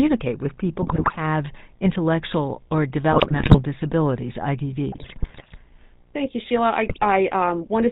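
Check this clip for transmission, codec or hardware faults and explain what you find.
The speech carries two faults: GSM full-rate codec colouring across the whole clip, and four bursts of GSM bit errors.

GSM full-rate codec (throughout): The sound stops at 4 kHz and has a buzzy, gravelly roughness, which fits the 13 kbps full-rate codec. Its excitation is a sparse, regularly spaced pulse train driving a vocal-tract filter. That grain sets it apart from the cleaner, merely muffled sound of plain telephone band-limiting.

GSM bit errors (0.82–1.18 s, 3.12–3.61 s just after "intellectual or", 4.92–5.57 s, 6.86–7.05 s): Corrupted filter, pitch and gain parameters reach the decoder, so frames come out with warped spectra and sudden level jumps. You hear squawks, pops and gargling. Lost packets sound different: they leave gaps or smoothed repeats instead.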